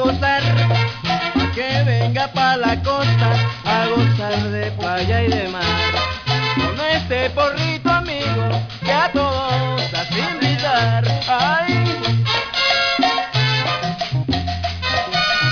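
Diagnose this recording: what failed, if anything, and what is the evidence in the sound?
High-frequency content throughout the recording sounds gritty and metallic, with inharmonic tones that don't follow the material, and the spectrum runs hard up to a ceiling near 5.5 kHz. This is aliasing from the sample-rate conversion stage. Energy above half the new rate was never filtered out, so it folds back around 5.5 kHz as wrong pitches, roughly 15 dB below the wanted signal. That fits a drop from 44.1 kHz to about 11 kHz without an anti-alias filter.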